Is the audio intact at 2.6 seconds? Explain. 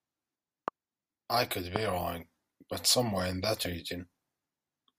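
Yes, the speech at 2.6 seconds is intact, with no dropout, click, distortion or other fault at that moment.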